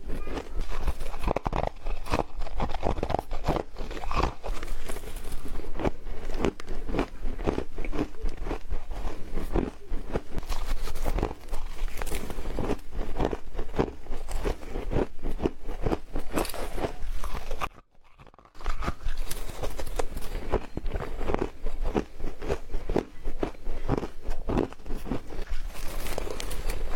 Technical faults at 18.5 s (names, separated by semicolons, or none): one channel inverted